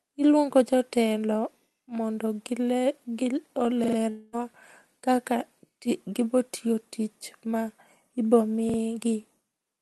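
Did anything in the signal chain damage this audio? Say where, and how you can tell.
Yes. At the driver or buffer stage, a repeated buffer occurs twice. From 3.84 to 3.97 s the same short piece of speech plays three extra times, and from 8.70 to 8.78 s two extra times, each with a hard join. Each repeat lasts about 43 ms, which fits a 2048-sample buffer. The device replayed it because fresh audio arrived late.

From 4.09 to 4.36 s, roughly 240 ms of speech is missing. The gap is filled with a buzzy or hissy continuation of the preceding sound that fades over its length rather than dropping to silence, and the speech resumes past the lost part. This is likely a long network dropout, with the receiver's concealment covering the missing packets.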